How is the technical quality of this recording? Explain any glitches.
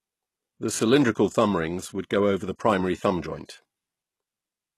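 The recording has plainly audible codec damage across the whole clip. The speech sounds like HE-AAC compression, likely at a very low bitrate near 16 kbps. The codec keeps only the lower spectrum and rebuilds the treble by copying lower bands upward, so sibilants sound gritty and lispy up to a hard ceiling at 12.3 kHz. Unlike simple low-pass muffling, the treble stays bright but synthetic.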